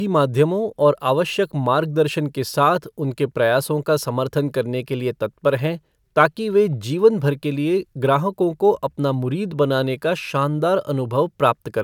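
A speech recording, with nothing technically wrong with it.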